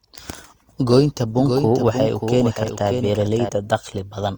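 From 0.89 to 3.49 s, a slower path likely recaptured the speech, adding a doubled audio track: a dry, quieter copy half a second late.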